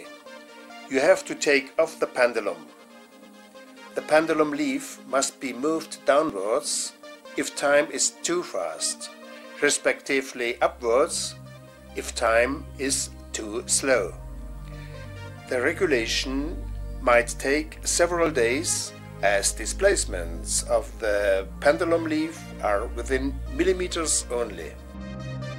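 Three small clicks or skips break the audio at 6.3, 12.27 and 18.26 s, about 6 s apart. This is overlap between stream segments: adjacent 6-second segments claim overlapping time, so the player discards a few milliseconds of genuine sound at each boundary, and the waveform jumps.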